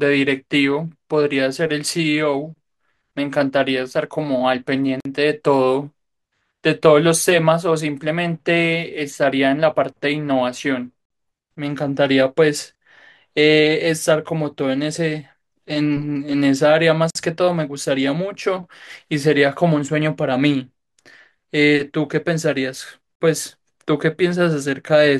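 At 5.00 s the speech drops out for 50 ms, ending at 5.05 s. The same hole returns at 11.05 to 11.10 s, 17.10 to 17.15 s, and 23.15 to 23.20 s. This is a gap between chunks. The audio was delivered in 6-second chunks, and silence was inserted at each join. Nothing is missing, but playback stops and restarts. Each hole falls about every 6 s.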